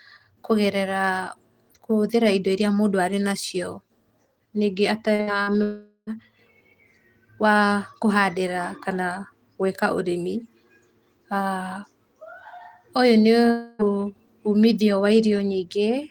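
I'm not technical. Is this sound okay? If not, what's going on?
No. Around 5.15 to 5.30 seconds and again at 5.43 to 5.50 seconds, the speech has three brief smeared or wobbly moments, like tiny hiccups. These are short concealed packet losses: each time, about 40 milliseconds of the call arrived too late to be played. The receiving end papered over each gap by stretching out the sound just before it, then blended back into the real audio.

Right after that, from 5.63 to 6.10 seconds, the sound trails off into a fading buzz or hiss, goes briefly quiet, then picks up again with almost half a second missing. A shorter version happens at 13.51 to 13.82 seconds, with about 0.28 seconds lost. These are most likely long network dropouts: the connection briefly stopped delivering audio, the receiver stretched out the last sound for as long as it could, and whatever was said in that time was never heard.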